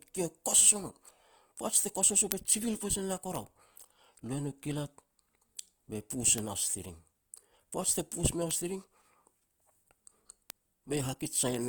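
A speech recording with a grainy, rough texture throughout, as though fine noise were woven into the voice, while the top end still reaches about 20.1 kHz. This is likely Opus compression in its music-oriented CELT mode, which rebuilds starved bands with folded or noise-filled content, and the plainly audible damage fits a low rate near 24 kbps. Five isolated, sharp ticks occur at 2.32, 3.35, 6.38 (just after "be pus"), 8.51 and 10.50 s, each a broadband click unrelated to the speech. These are bit error spikes: a flipped bit makes a sample jump by a power of two and snap back, one sample each time except the first, which spans three.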